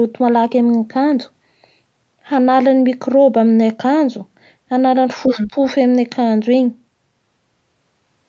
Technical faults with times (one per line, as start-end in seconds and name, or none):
5.25-5.51 other side's voice leaking through
5.51-5.55 speech suppressed in double talk